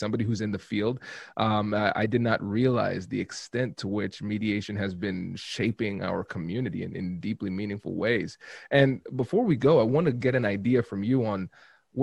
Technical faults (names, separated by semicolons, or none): none